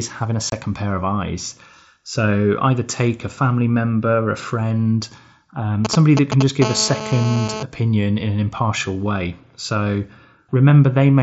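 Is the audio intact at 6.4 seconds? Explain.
No. From 5.85 to 6.43 s there are GSM signalling bursts: a nearby 2G phone transmitting short radio bursts that the audio circuitry rectifies. They are heard as a galloping dit-dit-dit of short 217 Hz buzzes at roughly the same level as the speech.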